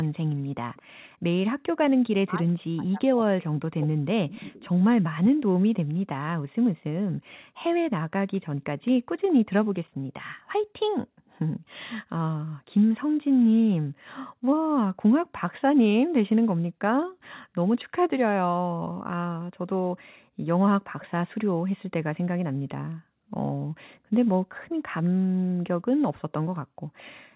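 Speech carrying an echo leak, with a faint copy of the talker returning about 216 ms late at 0.03–0.82 s, 4.3–4.37 s, 8.33–8.91 s and 25.04–25.09 s. It sits roughly 20 to 35 dB below the speech and shows on a spectrogram as weak repeats of the preceding harmonics, likely from a far-end loudspeaker echo canceller letting residue through. Between 2.25 and 4.7 s, speech suppressed in double talk dips the talker, about two seconds in total and up to around 40 dB deep. On the waveform these appear as sudden envelope gaps and on the spectrogram as blanked or dimmed columns, likely caused by the canceller turning down both its own talker and the loudspeaker echo while the two sides overlapped. All content stops at 4 kHz, consistent with a narrowband call codec.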